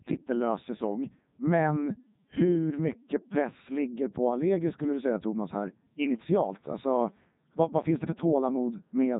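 The speech has been passed through the Codec 2 vocoder for its full length, consistent with its 3.2 kbit/s mode, so only pitch, voicing, energy and a spectral envelope survive and the decoder rebuilds everything from sine waves. The result is heavily robotic and buzzy, with nothing above 3.8 kHz.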